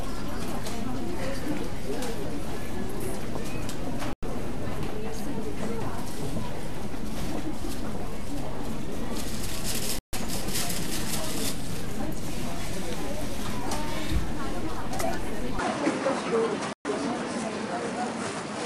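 At 4.13 s the sound cuts out for about 96 ms, until 4.23 s. This is a digital broadcast dropout. The receiver muted when good frames stopped arriving, and the missing audio is gone. A second hole runs from 9.99 to 10.14 s, about 144 ms. At 15.59 s the tone turns duller and about 5 dB quieter, with nothing above 10.6 kHz and a faint new noise floor. There is no gap. The likely cause is the input switched to a poorer device. Inside that stretch, a third dropout mutes 16.73 to 16.86 s, about 120 ms.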